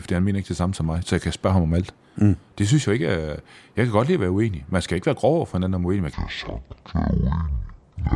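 From 6.13 s to the end, the audio is played back at the wrong sample rate: the samples come out at half the rate they were captured at, with no conversion between the two, which fits 48 kHz material being clocked out at 24 kHz. Because speed and pitch are tied together, the speech drops to half speed and falls a full octave, 12 semitones, sounding low, drawn out and sluggish.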